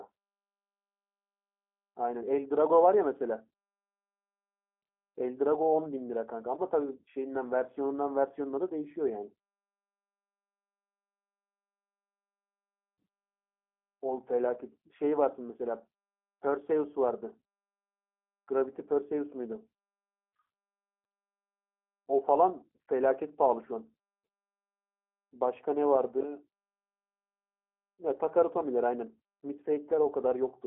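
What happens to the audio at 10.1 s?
At 10.1 s the speech carries the G.729 codec damage that runs through the entire clip. The codec rebuilds each short frame from a vocal tract filter, a pitch predictor and a few coded pulses, which fits an 8 kbit/s coder. The result is a plainly rough, synthetic, muffled sound with a telephone-line band of about 250 Hz to 3.4 kHz. On a spectrogram, energy stops sharply with nothing above 3.8 kHz.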